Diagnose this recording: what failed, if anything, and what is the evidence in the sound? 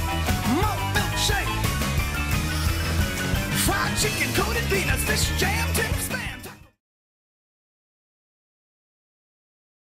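Nothing failed at any stage of the chain, and the only level change is a deliberate, smooth fade-out from about five and a half seconds down to silence at 6.81 s, with no click or hard edge where it ends.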